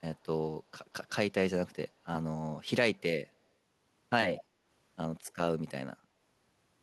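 A speech clip with two technical faults. Faint delayed copies of the speech, lagging by about 185 ms, appear at 0.15–0.26 s, 2.95–3.02 s, 4.37–4.43 s and 5.24–5.33 s. They are very quiet at first and most audible at 4.4 s, roughly 20 dB below the speech, and this is likely echo leak from a far-end loudspeaker that the echo canceller did not fully remove. Right after, from 4.47 to 4.64 s, the room background dips by up to about 6 dB for around 150 ms: background gated by the echo canceller, which pulled the microphone down while the loudspeaker played and then released it.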